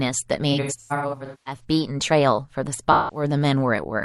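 AAC frame loss with concealment hits from 0.52 to 1.64 s, with 640 ms of speech lost in scattered gaps up to around a fifth of a second long, then from 2.92 to 3.23 s (171 ms). The decoder rebuilds the gaps from the last good spectrum, leaving smeared, noisy, phasey patches.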